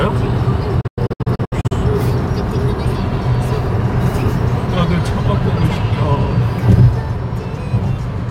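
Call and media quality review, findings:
Digital broadcast dropout, 0.81–1.72 s. Receiver muting on failed frames. Several short silent holes, longest 96 ms, totalling about 0.4 s across 0.9 s, each with an 8 ms fade. True silence rather than concealment smear or clicks. Content missing when audio resumes.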